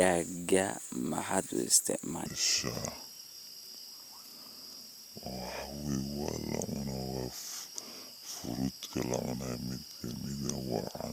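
Speech plays at normal speed until 2.26 s, then a section at the wrong speed runs to the end at 11.13 s. It plays at 0.7 times speed, so the sound turns slow and deep, roughly seven semitones lower. The likely cause is playback on a mismatched clock.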